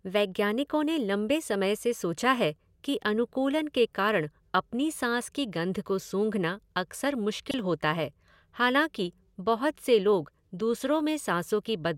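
A short chirp-like burst at 7.51 to 7.54 s, right after "गंध को सूँघना अक्सर" and before "होता है हालाँकि बहुत", is a corrupt frame decoded: damaged bits in a couple of compressed frames misplaced energy across frequencies, giving a fairly loud blip.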